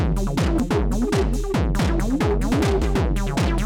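At 0.60 s, 1.79 s and 2.82 s the sound jumps abruptly, skipping roughly a tenth of a second each time, a little more at 1.79 s. This is likely a dropped buffer (overrun), where samples were overwritten before being read and the edges spliced together. There is no gap: the waveform shows a sudden discontinuity rather than silence, and the spectrogram shows a thin vertical broadband line where the content changes.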